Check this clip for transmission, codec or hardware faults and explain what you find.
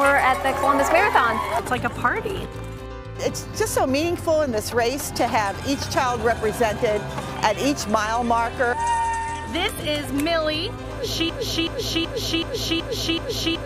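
One fault, a broken-record loop from 11.29 s to the end. The playback or stream likely stalled and kept resending its last 377 ms fragment, which repeats six times back to back and replaces the audio that should have played.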